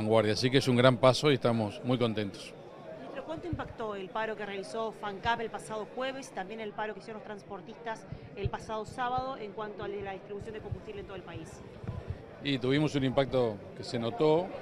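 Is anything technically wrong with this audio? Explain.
Yes. From 6.67 s to 10.46 s, de-emphasis has been applied wrongly: a treble-cut curve meant to reverse pre-emphasis acts on audio that never had that boost or had already been de-emphasized, so the response slopes down to about 8 dB below 1 kHz by 10 kHz, leaving the sound dull and muffled.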